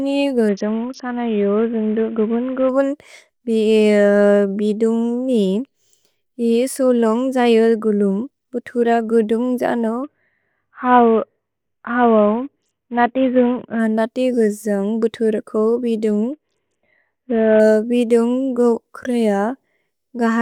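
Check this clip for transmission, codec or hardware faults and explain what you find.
The speech has three Bluetooth SBC bit pool drops, at 0.49–2.69 s, 10.04–13.79 s (just after "गुलुम् भुतुर गुदुन्ग् जनो") and 16.33–17.60 s. Each time the link ran short of capacity and the encoder cut its bit budget sharply, consistent with a bit pool falling from 28 to 5, near 54 kbps. The top sub-bands lose their bits and the treble goes dull, while the remaining bands are coarsely quantised into gritty noise. Unlike a packet dropout, the sound never stops, and unlike a plain low-pass filter it gains grit, then recovers fully.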